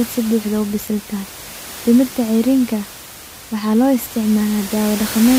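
A speech recording with nothing technically wrong in it. Background noise from the room sits about 14 dB below the speech and belongs to the recording itself.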